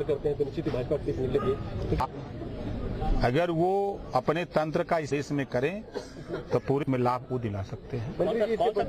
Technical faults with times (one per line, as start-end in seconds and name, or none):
2.00-2.06 damaged data in a compressed stream
5.07-5.12 damaged data in a compressed stream
6.83-6.88 damaged data in a compressed stream
8.78-8.84 damaged data in a compressed stream